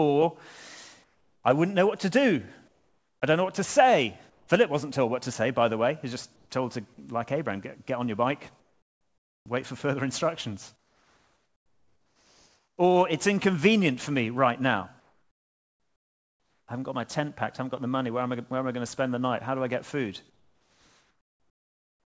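Comfort noise in place of the background appears in pauses at 1.04–1.44, 2.68–3.22, 4.30–4.48, 6.36–6.50, 8.60–9.46, 10.76–12.78, 15.00–16.68 and 20.30 s to the end. Each time, the real background gives way to a flat, featureless hiss. This is likely discontinuous transmission, with the receiver synthesising filler noise. The hiss is mostly about 4 to 8 dB quieter, and about 2 dB louder at 6.36 s. Nothing is heard above 8 kHz.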